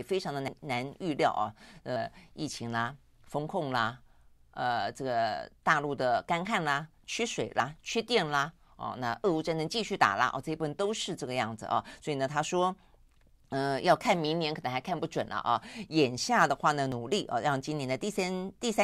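At 0.48 s the speech jumps abruptly, and roughly a tenth of a second of sound goes missing. The same happens at 7.6 s and again at 16.92 s, each time skipping a shorter stretch of a few hundredths of a second. There is no gap of silence. The audio simply leaps forward. This points to a dropped buffer (overrun): the likely cause is that the program fell behind and the hardware overwrote unread samples.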